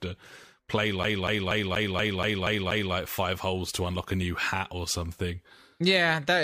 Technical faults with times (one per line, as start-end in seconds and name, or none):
1.03-2.94 CD stuck on one turn